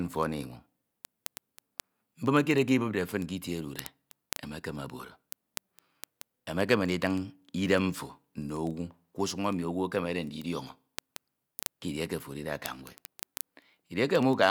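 A digital input running on its own clock, not locked to the sender's, produces word clock ticks from 0.12 s to 14.48 s. The two clocks differ by around 500 parts per million, so they slip past each other about every 40 ms. At each slip a single sample is dropped or repeated. Over the speech this comes through as several hundred sharp ticks at a steady rate of roughly 25 per second, continuing through the whole clip.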